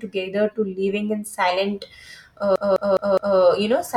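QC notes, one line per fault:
2.56 to 3.38 s, CD stuck on one turn: the same 0.21 s slice of speech plays four times in a row, each pass cut by a brief mute as the laser jumps back one track at a scratch, giving the fast, even stutter of a skipping disc.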